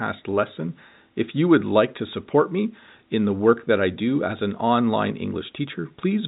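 Nothing is technically wrong with the speech in this clip, which comes through G.711 A-law telephone coding with no sound above 3.8 kHz.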